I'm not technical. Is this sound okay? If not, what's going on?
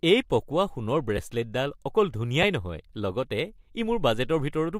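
No. At 1.17 s and again at 2.43 s, the speech has a brief garbled flutter, caused by frames out of order. The audio travels in tiny chunks, and here two neighbouring chunks were played back swapped. Each swap is very short: about 5 ms of sound per chunk at 1.17 s and about 3 ms at 2.43 s, which points to two-frame and one-frame blocks. Nothing is lost, only reordered.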